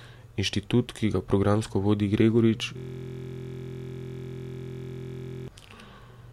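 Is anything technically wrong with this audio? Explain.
Yes. System hang loop, 2.77 to 5.48 s: the system froze while the hardware kept replaying one 23.2 ms buffer, consistent with 1024 samples, heard as a steady 43.1 Hz buzz.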